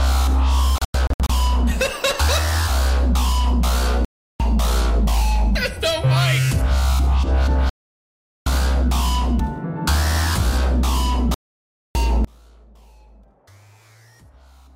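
The sound keeps muting in a digital broadcast dropout: scattered short holes from 0.78 to 1.30 s, then solid cuts at 4.05–4.40, 7.70–8.47 and 11.34–11.96 s, where the receiver lost frames and went quiet. From 12.25 s to the end there's an audio dropout to a faint residue, with just a leak about 30 dB down, likely the feed dropping while the path stayed live.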